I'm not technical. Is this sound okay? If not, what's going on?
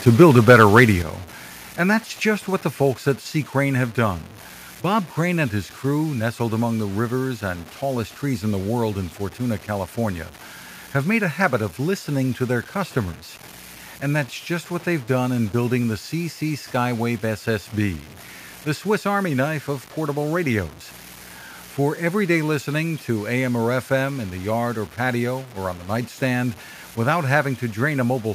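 No. The speech sounds grainy throughout, especially in quiet parts. This is likely low bit depth without dither, storing the sound with too few levels.

From 0.07 to 0.85 s the loudest parts sound harsh and crackly. The likely cause is microphone overload, with the peaks cut flat.

At 1.02 s everything suddenly gets quieter at once. The software likely turned the microphone volume down in one step.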